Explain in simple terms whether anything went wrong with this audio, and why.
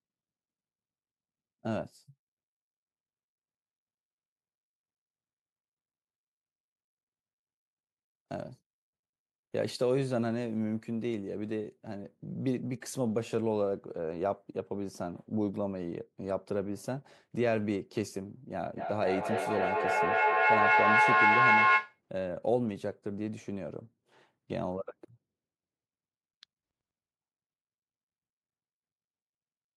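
Feedback echo between two devices, from about 18.76 to 22.0 seconds. Two devices in the same room were on the call, so one played out what the other's microphone had sent, and that microphone caught it again. Each device's echo canceller only removes its own playback, so the sound kept circling back about every fifth of a second. The loop was loud enough that the repeats built up, getting louder than the speech itself, rather than fading.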